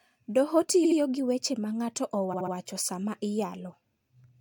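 Repeated frames occur at 0.84 to 0.98 s and again at 2.32 to 2.53 s. A short run of compressed frames was delivered more than once, so the decoder replays the same 69.7 ms slice of speech, a length that fits a run of three frames. The first replays twice, adding 139.3 ms. The second replays three times, adding 209.0 ms. Each is heard as a rapid mechanical stutter, and the speech runs longer by that amount.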